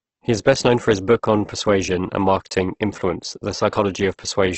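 Throughout the speech, the sound is rough, grainy and noisy, with nothing above 8.2 kHz. This is likely heavy Opus compression in its music (CELT) mode, at a bitrate around 12 kbps: thin bands are filled with folded or noise-like energy rather than left empty.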